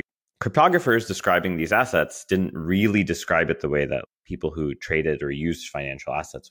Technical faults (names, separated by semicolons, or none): crude rate conversion